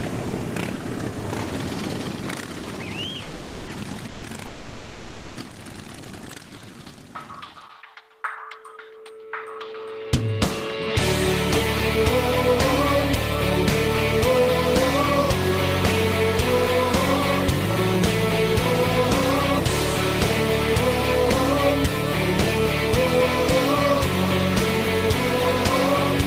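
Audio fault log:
3.25–5.38 s, call audio freeze: Three stalls, at 3.25–3.70, 4.08–4.25 and 4.47–5.38 s, each bridged by the last bit of sound stretched into a fading buzz or hiss, never full silence. Nothing is lost. The audio picks up where it stopped, so you end up about 1.5 s further behind. Likely packets held up in transit draining the jitter buffer.
6.50–6.93 s, jitter buffer slow-down: The receiver repeated single pitch periods or bits of pauses to rebuild its reserve, adding about 65 ms. That stretch plays at roughly 87% speed with the pitch unchanged, so the sound comes out drawn out rather than lower.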